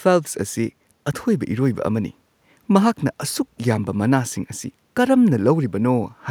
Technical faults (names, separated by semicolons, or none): none